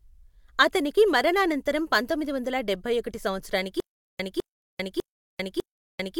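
At 3.80 s the speech breaks into a stutter with silent gaps that lasts to the end: a 206 ms fragment repeats four times, each followed by 394 ms of digital silence, a 600 ms cycle. This is likely a stalled stream replaying its last fragment, and the audio after it is lost.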